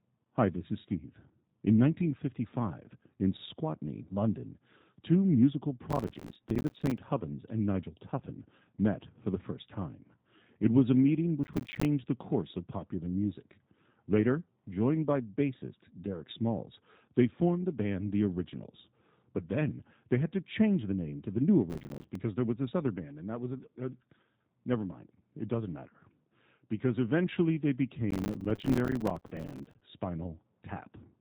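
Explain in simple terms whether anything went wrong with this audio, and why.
Processor overload crackle appears in four bursts: 5.9 to 6.98 s, 11.44 to 11.85 s (after "was a meeting"), 21.70 to 22.16 s (before "there was this other"), and 28.1 to 29.8 s (after "because eventually they"). The computer fell behind, leaving dozens of tiny silent gaps, each a few milliseconds long, heard as gritty crackle.

G.729 codec compression runs through the whole clip. This phone-call codec rebuilds speech from a simplified model of the voice, so the speech sounds slightly rough and synthetic, and it cuts off everything above 3.8 kHz, which makes it sound narrow and muffled.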